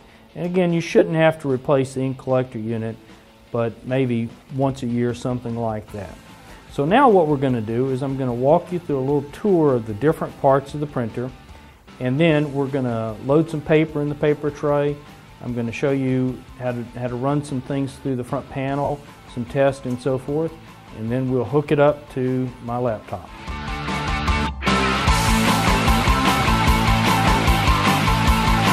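Two brief smeared, hissy gaps break the audio, at 0.99 to 1.01 s and 18.84 to 18.90 s. These are lost LE Audio frames, about 22.5 ms and 52.5 ms, fitting three and seven 7.5 ms frames. The LC3 decoder refilled them with the last spectrum under random signs, fading it toward silence during the longer dropout.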